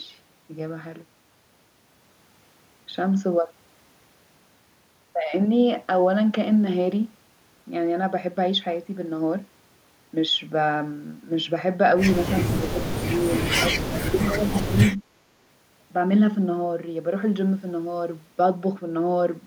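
The echo canceller most likely mistook this talker for loudspeaker echo while both ends spoke at once, giving speech suppressed in double talk from 12.53 to 13.3 s and again from 13.48 to 14.75 s. It pulled the level down by up to about 30 dB, so the speech sinks and breaks up over roughly half a second in the first stretch and about a second in the second, with a brief recovery between them.

From 14.97 to 15.01 s comes a short echo leak. Part of the far end's loudspeaker sound likely reached its microphone and was not cancelled, so it returns here. A faint scrap of the speech is heard 341 ms late, around 35 dB below the main level.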